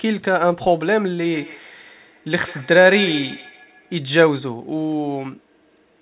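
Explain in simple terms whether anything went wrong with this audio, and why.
Two devices in the same room were on this call together, and one of them played out what the other's microphone had just sent. That microphone heard it and sent it back into the call. Each device's echo canceller removes only its own playback, so nothing caught this loop. The result is feedback echo between two devices from 1.24 to 3.98 s: the speech repeats roughly every 150 milliseconds, each copy quieter than the speech, thinner and more ringing.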